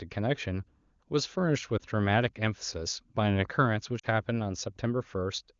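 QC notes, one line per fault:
1.78–1.80 s, lost AMR speech frames: one 20 ms frame fails. The decoder repeats the last good pitch and vocal tract settings at lower gain, so the sound dips briefly.
3.99–4.06 s, lost AMR speech frames: two frames, 40 ms, are lost in a row. The concealed sound smears and fades, then returns weak for a moment against the clear wideband audio.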